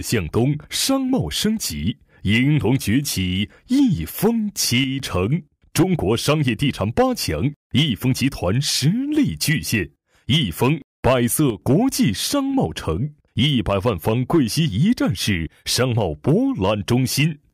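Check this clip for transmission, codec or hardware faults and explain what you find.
Two brief level drops point to one channel dropping out, from 4.84 to 5.00 s and again from 11.50 to 11.62 s. Each time the sound falls abruptly by about 6 dB and then snaps back. The likely cause is one side of a stereo pair going silent, so that after the mono sum only half of the shared material remains. A fade or gain ride would ramp; these steps are square-edged and hold a fixed depth.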